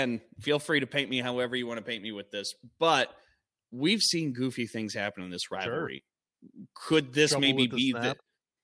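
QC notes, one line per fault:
No fault found, so there is nothing to log in these QC notes.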